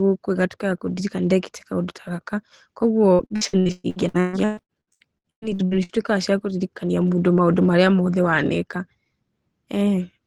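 From 3.13 to 5.92 s, repeated packet loss (robotic sound) chops the speech: nineteen gaps, up to 127 ms, patched by extending prior audio, covering nearly half the stretch.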